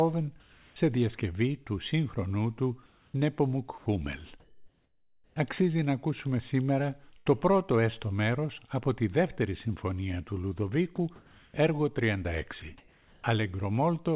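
From 0.40 to 0.76 s the background turns into comfort noise. It is a smooth, featureless hiss in place of the real ambience. Its level matches the original, sitting about 31 dB below the loud parts. The likely cause is discontinuous transmission: the sender stopped sending during a pause and the receiver filled it with synthetic noise. The same swap happens from 2.86 to 3.14 s, where the background sits about 35 dB down.

At 3.78 to 3.86 s the sound is dropped by the voice detector. About 70 ms of real sound gives way to steady noise, then returns. The detector likely judged a quiet tail as background and stopped sending.

From 4.40 to 5.36 s comfort noise again replaces the background, this time for nearly a second. The background here is very low, about 43 dB below the loud parts. The fill shifts the level by about 3 dB.

From 7.18 to 7.28 s there is a burst of packet loss. About 80 ms of audio is missing. 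The receiver stretches the last sound across the gap and fades it. The result is a short held smear before the audio picks up further on.

At 10.96 s a tiny piece of sound, about 20 ms, is dropped by the voice detector. Comfort noise then carries on to 11.54 s, flattening the background.

From 12.60 to 13.24 s the sound is chopped by the voice detector. Sending likely switched on and off repeatedly, and about 480 ms went to synthetic fill. It sounds choppy. Throughout, nothing reaches above 4 kHz, which fits a narrowband G.711 call codec.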